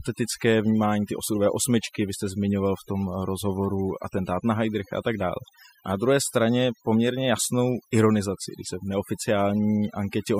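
From start to finish the speech carries overdone noise removal: the noise reduction was set so aggressively that frequency bands near the noise floor get pulled down or gated off, taking quiet speech detail with them. Pauses sink to near silence flecked with twinkling specks.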